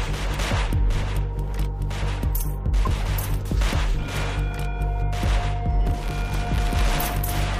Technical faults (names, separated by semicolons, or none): buffer tearing